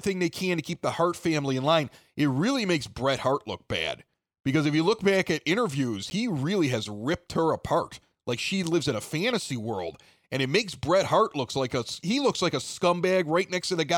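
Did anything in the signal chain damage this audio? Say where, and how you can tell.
Yes, at 6.1 s there's a block of digital silence, a 10 ms dropout with hard edges. That points to the driver or buffer stage missing its deadline and outputting zeros.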